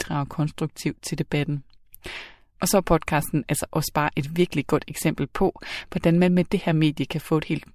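No technical faults can be heard anywhere in this recording.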